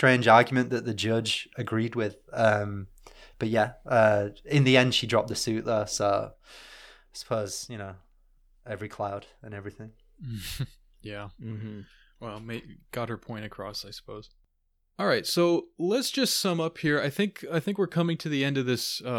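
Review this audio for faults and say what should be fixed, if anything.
At 6.34 s the speech drops abruptly by about 8 dB, and the background noise falls with it in the same instant. The lower level holds through to the end of the clip, so the second part sounds noticeably quieter than the first. This sudden gain jump is likely caused by a digital gain setting being changed from one sample to the next without any fade, so voice and noise step down together. To prevent it, apply gain changes with a short ramp of a few tens of milliseconds rather than switching them instantly.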